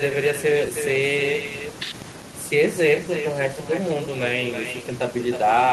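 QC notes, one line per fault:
Throughout: echo with no canceller. Every phrase of speech is trailed by a second copy arriving roughly a third of a second later, about 8 dB quieter. The copy sounds thinner than the original. The far end is playing the call through a loudspeaker, and its microphone picks that sound back up. Nothing at that end removes it, so it returns after the network round trip as a delayed shadow.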